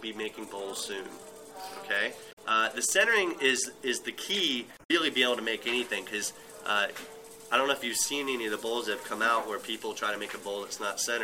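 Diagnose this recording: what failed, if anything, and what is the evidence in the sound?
The failure is at the codec stage, from damaged data in the compressed stream: corrupted bytes reached the decoder, which misread the affected frames, lost sync and had to hunt for the next valid frame header before decoding cleanly again. The evidence is two short disruptions, a chirp, squawk, click or short hole that doesn't belong to the surrounding sound, from 2.29 to 2.38 s and from 4.74 to 4.91 s, each lasting only about a tenth to a fifth of a second.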